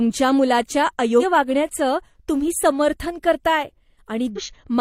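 At 4.33 s, near the end of the speech, a brief disturbance lasts until 4.39 s. This is damaged data in a compressed stream. Bytes in that stretch were corrupted. The decoder misread those frames, lost sync and hunted for the next valid frame header.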